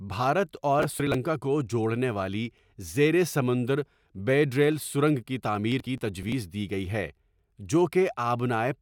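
Processor overload crackle at 0.80–1.14 s and 5.72–6.32 s: the processor repeatedly misses deadlines for buffers of around 10 ms, skipping each one, so gritty gap-riddled tearing rides over the speech.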